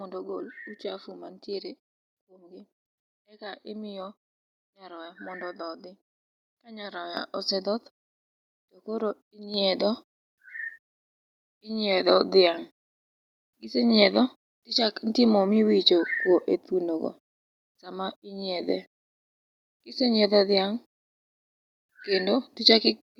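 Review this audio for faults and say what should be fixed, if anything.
The microphone volume is stepped up twice, at 7.17 s by about 8 dB and at 9.54 s by about 5 dB. Automatic gain control raised the device's input volume in discrete jumps rather than smoothly, so speech and background noise rise together. On the waveform the envelope jumps abruptly at each point, and the spectrogram brightens across all frequencies at once, noise floor included. To prevent it, disable automatic microphone volume adjustment and set a fixed input level.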